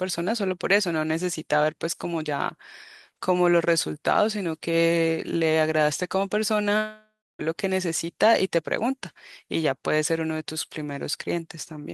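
Speech that breaks off at 6.77 s: the last sound smears into a fading buzz, then goes quiet for roughly 0.29 s before the talker returns at 7.41 s. About 0.62 s of speech is simply gone, not delayed. This is a long network dropout. The likely cause is that audio packets stopped arriving, so the receiver stretched the final sound to cover the gap and then gave up and left silence.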